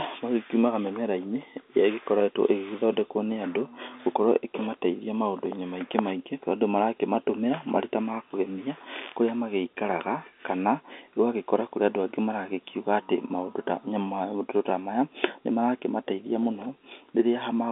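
No technical faults are audible.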